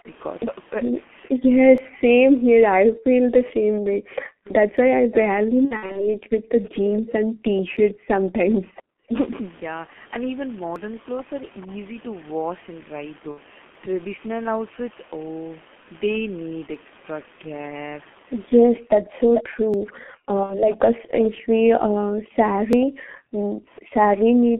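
Throughout, the G.723.1 codec shapes the sound. Its heavy, muffled, hoarse quality points to roughly 6.3 kbit/s coding. Consonants smear, and the spectrogram shows a hard band of about 200 Hz to 3.4 kHz, with nothing above.

From 0 to 9.17 s, speech suppressed in double talk pulls the level down in pieces, by roughly 40 dB at its deepest. The likely cause is an echo canceller ducking the talker while the far side also speaks. The waveform shows the envelope collapsing in chunks, and the spectrogram loses its upper bands during the dips.

Audio missing between chunks appears as tiny skips at 1.78, 4.77, 7.77, 10.76, 13.75, 16.75, 19.74 and 22.73 s. They fall every 3.0 s, which points to a recorder likely dropping a few milliseconds at each chunk boundary. At each one, the waveform shows a small splice discontinuity.

From 5.65 to 6.14 s, VoIP packet loss concealed by the speech codec covers 180 ms of missing frames scattered over about 300 ms, with runs of up to 60 ms. 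The decoder extrapolates from its last pitch and filter into a fading, stretched sound. The spectrogram shows smeared, repeated frames, and the voice stays weak afterwards.

At 11.61 to 11.74 s, an echo leak returns a faint scrap of the voice 435 ms late, far below the direct speech, likely from a loudspeaker echo that was not fully cancelled. It shows as a dim, delayed ghost of the preceding pattern on the spectrogram.

Concealed packet loss returns at 13.31 to 13.38 s, where 60 ms is lost and heard as a brief smear. Double-talk suppression comes back from 18.80 s to the end, with the same deep chopped dips. Within it, a further 60 ms of concealed loss between 20.43 and 20.74 s leaves another short, fading blur.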